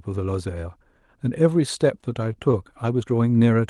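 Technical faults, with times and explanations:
1.69 to 2.56 s, scattered short gaps: About five tiny dropouts land across this stretch of speech. None is longer than about 20 ms, and together they cover only a small share of the span. Each hole was patched by stretching out the sound just before it, so the speech stays clear. What remains is a few brief ticks and smeared hiccups. The band-limited call sound around them fits an Opus path with a top near 12 kHz.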